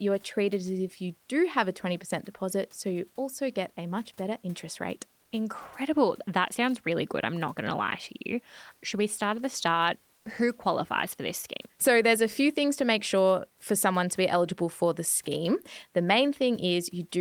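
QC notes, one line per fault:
10.15–10.23 s, comfort noise in place of the background: for about 80 ms the real room noise, sitting roughly 40 dB under the speech, gives way to a smooth, featureless hiss about 2 dB quieter, losing the texture of the room before the genuine background returns. This is likely discontinuous transmission: the sender stopped sending audio during a pause it judged silent, and the receiver filled the gap with synthetic noise shaped only roughly like the room.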